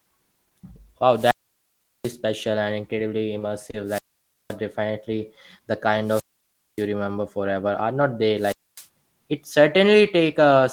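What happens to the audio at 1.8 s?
At 1.8 s the speech is inside a wireless microphone squelch dropout running from 1.13 to 2.17 s. The radio link fades, hiss briefly rises, then the receiver's squelch mutes the output for about 0.74 s before the signal recovers and speech returns.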